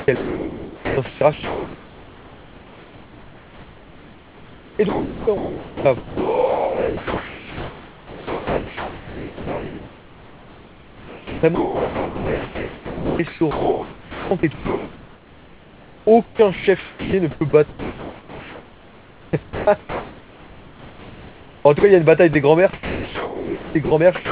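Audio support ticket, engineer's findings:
Sound chopped by the voice detector, 0.00–21.83 s and 22.73–24.31 s. Speech repeatedly gated out: about 19.5 s, then 1.24 s, replaced by comfort noise. Likely sender VAD toggling on quiet syllables and word edges; room noise about 26 dB below speech.

Sound dropped by the voice detector, 22.33–22.35 s. 20 ms of speech lost, steady comfort noise in its place, speech resumes when detection retriggers. Likely sender VAD misclassifying a quiet stretch as background and halting transmission. Band-limited to 4 kHz throughout, consistent with the G.711 call path.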